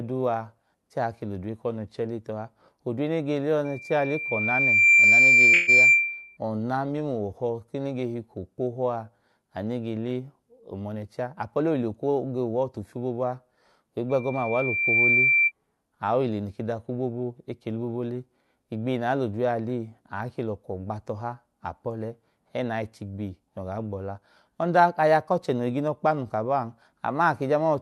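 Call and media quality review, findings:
Loudspeaker feedback squeal, 3.65–6.37 s: pure 2.4 kHz tone swelling over about one and a half seconds to roughly 10 dB above the speech. Mic capturing its own loudspeaker output; loop gain above unity at 2.4 kHz, so that frequency self-reinforces until broken.

Loudspeaker feedback squeal, 14.09–15.52 s: same 2.4 kHz tone, faster build of about one second, again about 10 dB over speech, ending just before "aohile noke". Same acoustic loop, recurring.

Call audio freeze, 5.53–5.70 s, inside the first squeal: sound hangs and smears for 144 ms, then resumes where it left off, nothing dropped, no silence. Likely delayed packets draining the jitter buffer, receiver stretching the last frame, adding 144 ms of latency.

Jitter buffer speed-up, 10.59–11.89 s: speech runs about 11% fast (111% speed), pitch unchanged, sounds rushed. Buffer over target after a packet burst; receiver trimming pitch-period-sized slices, roughly 150 ms removed in total, to recover latency.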